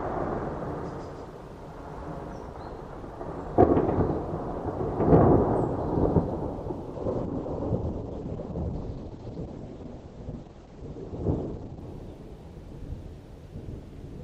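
Doubled audio track, 0.0 to 2.46 s: already under way when the clip begins, a second full-band copy trails the sound by about 150 ms, a few dB quieter, then stops abruptly. It is likely a duplicate capture path or a misaligned edit.

Call bitrate drop, 6.95 to 11.87 s: the encoder was starved of bits, so the audio turns coarse and watery, and the top end above 8 kHz disappears. That fits a fall from around 64 kbps to about 10 kbps before recovery.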